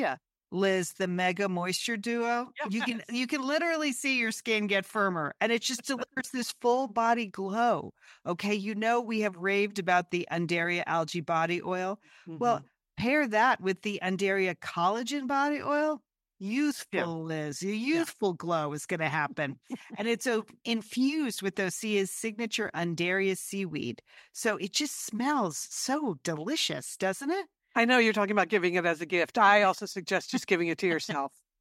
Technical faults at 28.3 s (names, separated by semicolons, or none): none